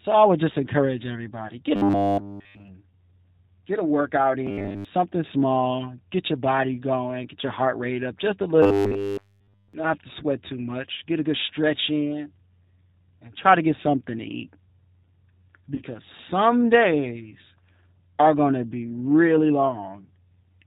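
Throughout, the speech passes through the G.729 codec at 8 kbit/s, which rebuilds each frame from a vocal tract filter and a sparse pulse pattern and discards everything above 4 kHz. The result is plainly audible damage: a muffled, band-limited, slightly rough and synthetic voice.

At 1.47 to 1.53 s, just after "I would just encourage", VoIP packet loss concealed by the speech codec appears. About 30 ms of audio went missing, which fits a single lost packet. The decoder stretched its last pitch and filter state to cover it, so the sound smears into a brief buzzy tone or coloured noise that fades and then recovers weakly.

From 1.76 to 2.68 s, the robotic sound from repeated short buffers sets in, likely because fresh audio arrived too seldom and playback kept looping its last fragment. The loop is about 10 ms long, which imposes a rigid 100 Hz metallic buzz over essentially the whole stretch. 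The sound still roughly tracks the speech contour. The same buzz returns at 4.47 to 4.85 s, where it affects most but not all of that span. It returns once more at 8.63 to 9.74 s, right after "rate up just a", where it again covers the full stretch.

At 15.75 to 15.82 s, just before "some days", a second concealed packet loss of about 30 ms produces the same short, fading smear.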